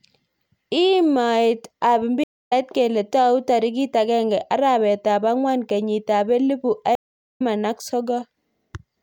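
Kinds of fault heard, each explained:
Stream reconnect: the connection dropped and the player restarted a fresh decoder mid-stream, so the speech stops dead, sits silent, then picks up at a later point rather than where it left off. Here it happens twice: at 2.24 s a silence of 250 ms, then a jump of roughly a fifth of a second before "kele tou tarik akenge", and at 6.95 s, right after "angwan kenyit ab elipu", a 422 ms silence with about half a second skipped. Unlike a plain dropout, the audio does not resume where it stopped; material is lost beyond the silence itself.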